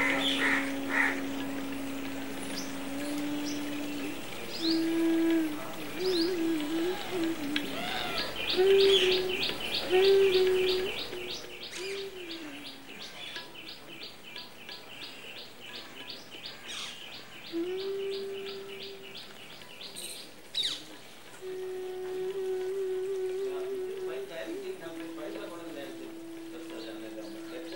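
Zipper noise runs from 10.76 to 11.69 s, as the level drops by roughly 10 dB in unsmoothed 1 dB steps, around ten per second. Each abrupt step leaves a small click, so a fine ticking rides on the sound during the fade.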